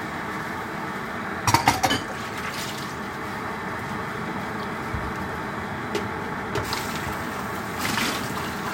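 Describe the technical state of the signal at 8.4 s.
At 8.4 s the signal is intact, with no fault audible at that moment.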